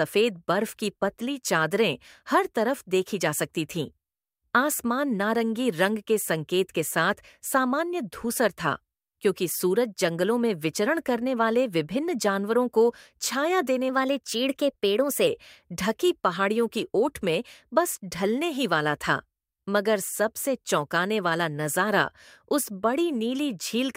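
From 13.89 to 15.27 s there's a wrong sample rate: the audio runs about 1.09 times fast and sits roughly 1.5 semitones sharp, which fits 44.1 kHz material played at 48 kHz.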